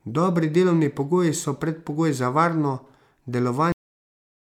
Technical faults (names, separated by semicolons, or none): cut-off end